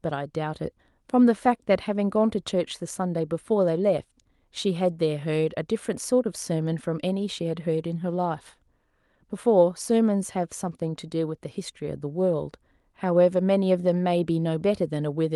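Speech with no audible technical faults.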